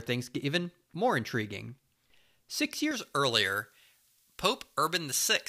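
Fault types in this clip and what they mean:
pre-emphasis left on: from 2.91 s to the end, a transmission treble boost is never undone, putting 10 kHz about 11 dB above 1 kHz, which fits a J.17 curve. The lift rises with frequency, making the speech thin and sibilant.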